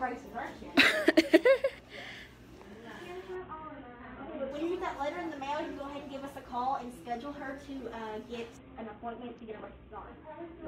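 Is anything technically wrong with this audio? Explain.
Yes, there are two Bluetooth SBC bit pool drops, from 3.35 to 4.51 s and from 8.57 s to the end. The link starved, so the encoder cut the top sub-bands and quantised the rest coarsely. Treble goes dull and gritty, which fits a fall from bit pool 28 to 5, near 54 kbps.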